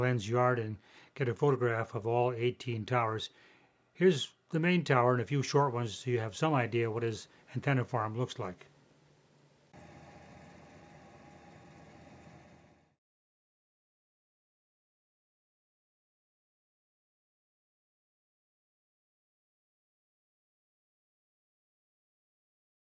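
Nothing stood out on listening; the audio carries the expected character of call microphone processing, with the lowest bass trimmed and nothing above 8 kHz.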